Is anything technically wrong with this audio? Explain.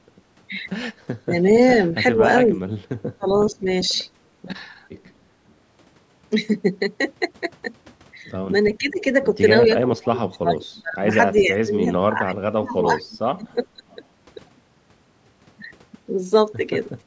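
Yes, there are three kinds of echo-canceller fault in this speech.

Speech suppressed in double talk occurs from 1.25 to 3.92 s and from 8.78 to 13.83 s. The likely cause is an echo canceller that could not separate the near talker from loudspeaker echo while both sides spoke, so it turned everything down. In the first stretch the voice dips by about 15 dB for roughly half a second in total. In the second it drops as deep as about 35 dB, with pieces missing for around 3 s overall. Unlike plain level gating, the talker's own voice is what thins and breaks up.

Echo leak appears from 2.47 to 5.08 s, 8.71 to 8.91 s, 11.36 to 11.42 s and 13.13 to 13.96 s. A faint copy of the speech trails it by 399 ms, about 20 to 30 dB below the direct voice. This is likely residual echo from a loudspeaker side that its canceller failed to remove and then sent back. The fixed 399 ms delay sets it apart from room reverberation, which smears continuously rather than repeating at one spacing.

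Background gated by the echo canceller comes at the very end, 17.01 to 17.06 s. For about 50 ms the room sound drops by about 8 dB. The canceller clamped the microphone while the loudspeaker was active. This differs from double-talk suppression because no speech is cut. Only the ambient floor briefly dips. The call microphone processing, with nothing above 8 kHz, is normal high-pass and band-limiting and not part of this fault.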